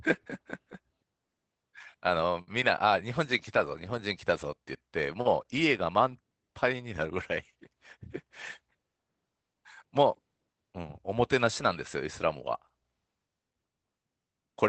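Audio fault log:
2.41–2.49 s, burst of packet loss: a run of consecutive packets failed to arrive, so the receiver extended the last sound for about 55 ms while fading it down. When playback resumed, roughly 60 ms of the speech had been skipped.
3.65–3.99 s and 5.25–5.27 s, lost packets rebuilt from error correction: the decoder replaced missing packets with the low-bitrate redundant copies carried in the following packets, so there is no gap. About 180 ms in the first span, consistent with nine 20 ms frames, and a single 20 ms frame in the second sound rougher and noisier than the speech around them.
5.21–5.27 s, short concealed packet loss: about 40 ms of audio never reached the decoder in time. The concealment continued the preceding sound for about 41 ms and crossfaded back into real audio, producing a brief smear. The final 20 ms of this loss overlaps the rebuilt frame at 5.25 s. The whole clip passed through an Opus call path whose 8 kHz audio bandwidth points to wideband coding at about 24 kbps.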